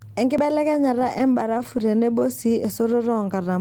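A dropped buffer (overrun) at 0.38 s is heard as a sudden jump forward in the speech, about 40 ms of audio gone and the two sides butted together. Its likely cause is the program failing to collect samples before the hardware overwrote them.

From 0.91 to 2.29 s come repeated stalls, a stutter of about twenty brief hiccups, none longer than 16 ms. Packets arrived late or too slowly, so the jitter buffer kept running empty and the receiver stretched the last sound each time. About 198 ms was filled this way, around 14% of the stretch, with nothing lost, but the speech drags and catches.

Inside that stretch, at 1.41 s, a second dropped buffer produces a skip of about 20 ms, likely from another missed read.

A third dropped buffer at 2.65 s gives a jump of about 20 ms, again likely an overrun overwriting unread samples.

A jitter buffer slow-down runs from 3.05 to 3.44 s. The receiver was building up reserve by repeating single pitch periods, adding 54 ms, so the speech plays at about 88% speed with unchanged pitch and sounds audibly drawn out.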